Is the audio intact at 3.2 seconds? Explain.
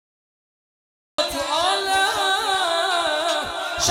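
Yes, at 3.2 seconds the audio is intact: nothing can be heard there that points to a technical fault.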